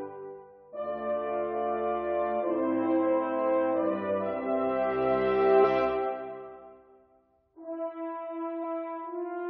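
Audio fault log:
5.63 s and 8.63 s, damaged data in a compressed stream: two brief blips, each about 14 ms, where corrupted frames made the decoder misread data and lose sync.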